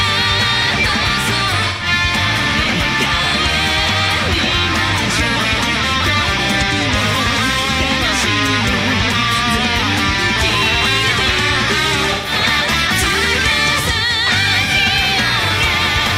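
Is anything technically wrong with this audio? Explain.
Yes. AAC frame loss with concealment occurs at 1.67 to 1.87 s, 12.13 to 12.32 s and 14.64 to 14.71 s. Missing data, about 128 ms twice and 43 ms once, was patched from the last good spectrum, giving brief smeared, noisy, phasey patches.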